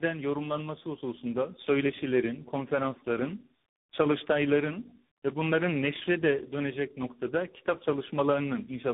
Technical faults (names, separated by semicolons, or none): tandem speech coding